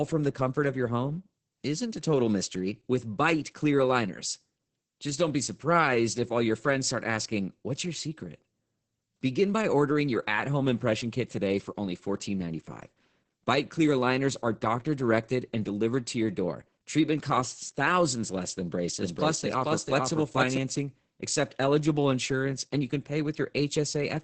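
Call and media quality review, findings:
Muffled, hoarse, slightly robotic speech throughout, nothing above about 8.8 kHz. Opus voice compression, SILK wideband mode at 10 kbps, 20 ms frames: linear-prediction coding with coarsely quantised excitation, heavy damage at this rate.

19.01–20.57 s, right after "costs thousands less than": speech heard twice, a second equally loud copy trailing by roughly 0.4 s, dry, starting and stopping abruptly. Doubled audio track, likely a second slower capture path mixed in.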